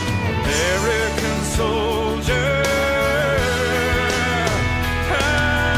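Nothing is technically wrong with this clip.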